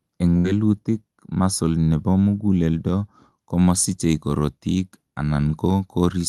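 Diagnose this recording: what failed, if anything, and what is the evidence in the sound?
A burst of packet loss on the network path hits at 0.37 to 0.47 s. For about 69 ms the receiver stretches and fades the last sound, then jumps ahead, dropping the audio between. Unlike a plain dropout, the gap is filled with decaying continuation rather than silence.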